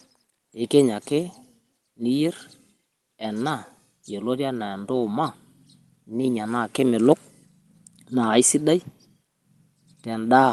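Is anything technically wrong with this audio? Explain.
No, nothing stood out as technically wrong when listening to this speech.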